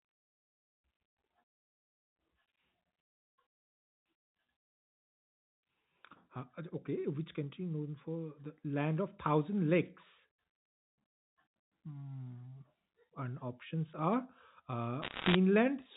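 From 15.02 to 15.35 s, bit errors on a digital phone line corrupt the G.711 telephone-band speech, flipping roughly one bit in seventy. Each flip damages one sample, so sharp ticks form a brief crackle while the speech continues unbroken, unlike packet loss, which leaves gaps or smeared repeats.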